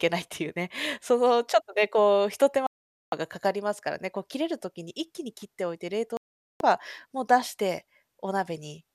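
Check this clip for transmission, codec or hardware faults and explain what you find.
Two digital broadcast dropouts interrupt the speech. From 2.67 to 3.13 s, and again from 6.17 to 6.61 s, the sound cuts or quickly fades to silence for just under half a second, about 0.46 s and 0.43 s, then resumes further along. The receiver stopped getting decodable frames, most likely from signal loss or checksum failures, and muted until good frames returned. Each gap points to a run of roughly eighteen or nineteen consecutive lost frames, and the speech sent during those gaps is gone.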